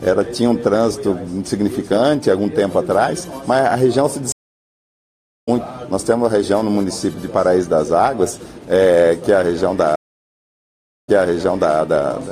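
Silence falls at 4.32 s for 1.15 s, resuming about half a second further on, and again at 9.96 s for 1.13 s, resuming 0.7 s earlier and repeating material: a stream reconnect, the connection dropping and a fresh decoder joining mid-stream.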